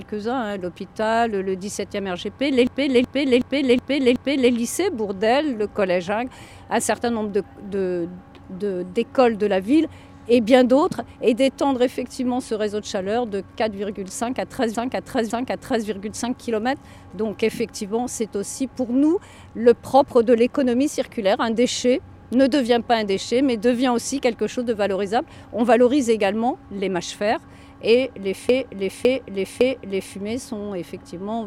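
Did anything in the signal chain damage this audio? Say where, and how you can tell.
Yes. Repeated frames: stutters at 2.67–4.53 s, 14.75–15.86 s and 28.49–30.17 s, each replaying a 0.37 s or 0.56 s block, as compressed frames were written or sent more than once.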